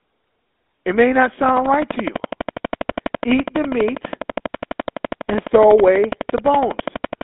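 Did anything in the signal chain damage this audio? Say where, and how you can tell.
Yes. At the codec stage, the whole clip carries the buzzy, gravelly roughness of the GSM full-rate codec, inside a line band of roughly 250 Hz to 3.6 kHz, which fits the 13 kbps full-rate coder. Unlike plain band-limiting, which only muffles, the pulse-driven excitation adds a coarse grain to every voiced stretch.

From 1.49 s, just after "may not", to 7.22 s, a train of clicks ticks at a regular 12 per second, about 70 in all, peaking about 15 dB above the signal. The likely cause is interference reaching the analogue wiring or a faulty connection or power supply. The clicks share one shape and continue through the pauses, which rules out dropouts or packet loss.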